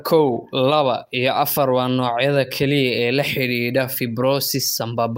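Nothing in this speech recording stood out as a technical problem on listening.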